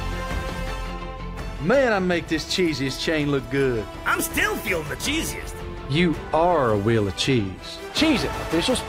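No technical faults are audible.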